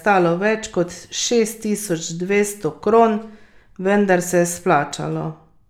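No technical faults can be heard anywhere in the recording. There is nothing in the audio that calls for a timestamp or a description.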